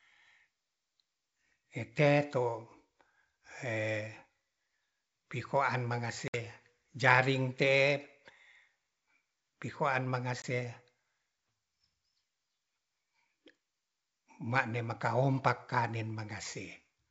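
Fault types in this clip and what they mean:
Packet loss on an ADPCM call: chunks of audio drop out as hard-edged silent holes, one of about 60 ms at 6.28 s (a few packets) and a shorter 20 ms gap at 10.42 s, right after "pi hoaan". Because the ADPCM decoder's predictor and step size drift out of sync with the sender's, the speech comes back slightly distorted, then settles within a few tens of milliseconds over the clear G.722 wideband line.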